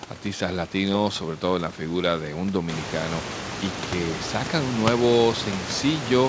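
No technical faults are present.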